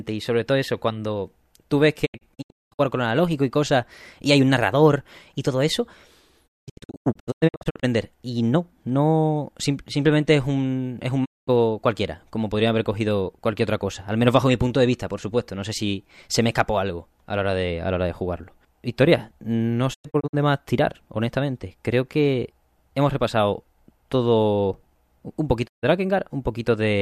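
Digital broadcast dropouts mute the speech five times. The receiver loses good frames and silences output with a quick 20 ms fade. At 2.05 to 2.81 s, after "eso cuando tú ves", it breaks into scattered holes. Then come 6.46 to 7.85 s, 11.24 to 11.49 s, 19.93 to 20.35 s and 25.66 to 25.85 s. The missing audio is simply gone.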